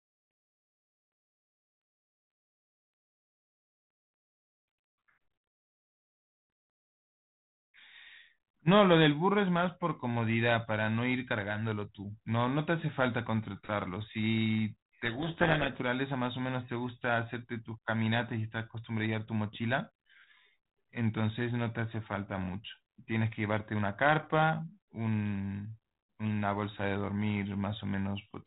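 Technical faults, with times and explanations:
15.04–15.81 s, codec payload misread: the sender and receiver stopped agreeing on the bit order inside each G.726 code word, so the decoder took every 4-bit difference value with its bits reversed and fed wrong steps into its adaptive predictor. The speech in this stretch is buried under harsh, grinding distortion. It clears once the two ends pack the code words the same way again, returning to the band-limited telephone sound that fits 32 kbit/s G.726.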